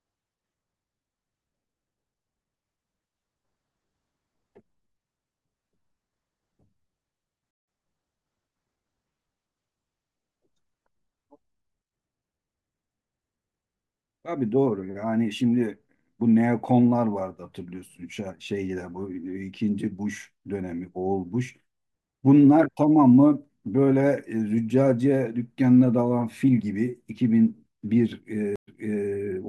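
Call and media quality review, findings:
Stream reconnect, 7.51–7.67 s: 163 ms speech dropout, then resumes about 150 ms further on, so speech is skipped. Dropped connection, fresh decoder. Stream reconnect, 28.56–29.08 s: 116 ms silence, then 405 ms of speech repeated as the server resends buffered audio.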